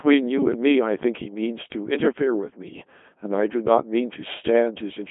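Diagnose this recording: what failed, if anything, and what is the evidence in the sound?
Codec stage: a Codec 2 vocoder runs throughout. The speech sounds robotic and buzzy, confined to about 150 Hz to 3.5 kHz. That fits a 2.4 kbit/s mode resynthesising speech from sine waves.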